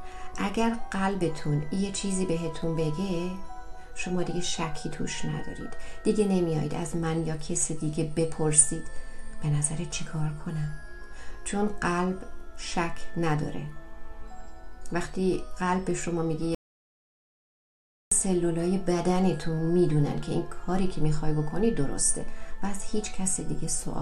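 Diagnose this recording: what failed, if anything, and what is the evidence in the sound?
An audio dropout to silence runs from 16.55 to 18.11 s. The sound stops abruptly mid-flow and returns just as suddenly after about 1.57 s, and the gap holds no room tone or noise floor at all. On the waveform this is a flat, silent stretch; on a spectrogram, a clean black column across every frequency. The likely cause is a lost input at the device or link stage while the recorder kept writing zeros.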